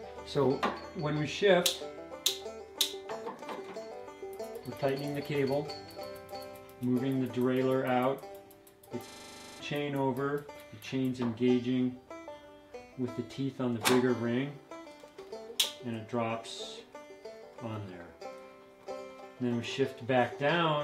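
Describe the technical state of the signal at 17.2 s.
At 17.2 s the signal is intact, with no dropout, distortion, glitch or other audible fault.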